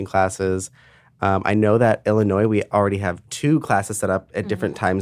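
No technical faults are audible.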